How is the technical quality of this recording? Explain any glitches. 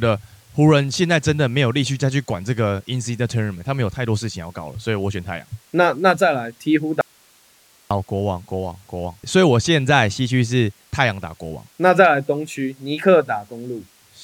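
There is one clear glitch in the speech. From 7.01 to 7.91 s the speech abruptly vanishes for about 0.9 s, leaving only faint hiss roughly 35 dB below the signal, then snaps back. This is an audio dropout to a faint residue, likely from the signal feed breaking while the downstream path stayed live and passed its own noise.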